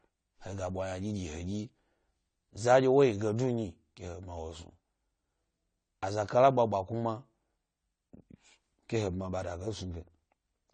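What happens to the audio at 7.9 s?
At 7.9 s the speech is still under the dulling that runs through the whole clip: nothing above 9 kHz, plus plainly audible warbling and smeared sibilants. This is likely AAC compression, consistent with AAC-LC near 32 kbps. Those swirling textures set it apart from a simple low-pass filter.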